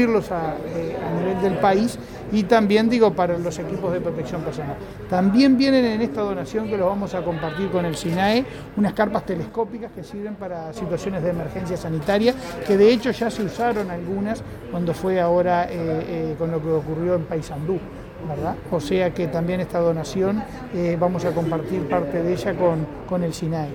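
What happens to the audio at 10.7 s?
A sudden gain jump is under way: the digital gain was likely cut by about 7 dB without a ramp at 9.49 s, so sound and background noise drop together until about 10.76 s.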